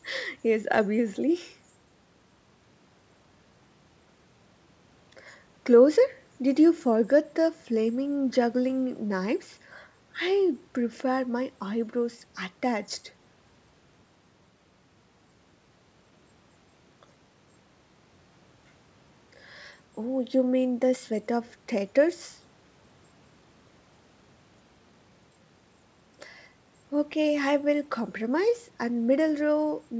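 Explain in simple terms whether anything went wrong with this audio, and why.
Nothing went wrong with this audio; the speech simply passed through an ordinary call's microphone processing and connection, which is expected to trim the very lowest and highest sounds.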